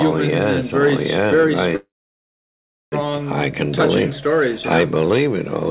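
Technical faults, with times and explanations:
1.76 to 2.95 s, call audio freeze: the sound halts and a 1.16 s gap is filled in. A short trace of the last sound fades out, then about 1.06 s of silence follows. Nothing is lost. The audio resumes where it stopped, now running 1.16 s late. Packets likely stalled in transit, draining the jitter buffer until they arrived. The narrow band, with nothing above 4 kHz, fits a G.711 call path.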